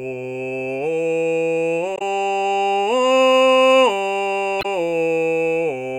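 Damaged data in a compressed stream breaks into this music twice, first from 1.96 to 2.02 s and again from 4.59 to 4.66 s, each lasting about 60 ms. In both spots the decoder meets bytes it cannot read correctly, loses its place in the frame sequence and hunts for the next valid frame header. The result is a short chirp, squawk, click or hole cutting across the music.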